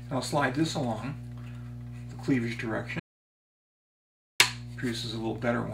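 A steady low tone runs under the sound from start to finish, a 60 Hz drone with some low harmonics above it, and it sits fairly loud, not far beneath the audio itself. This is mains hum. The power line is coupling into the signal path, through a ground loop between connected devices or through a transformer close to a cable or input, so the 60 Hz supply frequency is recorded along with everything else.

At 3.00 s the sound stops abruptly and the clip falls to complete silence, with no room tone, until the audio resumes at 4.40 s. This is an audio dropout to silence, about 1.4 s long. The input was most likely lost for that stretch, through a disconnected device, a failed link or a stray mute, while the recorder kept writing silence. Whatever was playing in that gap is not recoverable.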